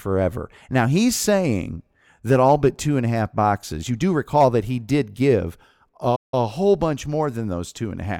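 A playback stall interrupts the speech at 6.15 s, cutting the output to silence for about 170 ms until 6.34 s, after which the sound resumes. The likely cause is the player running out of buffered data or its thread being briefly blocked.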